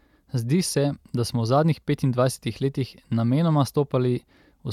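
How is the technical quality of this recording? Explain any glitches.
The technical quality of the recording holds up, with no glitches to explain.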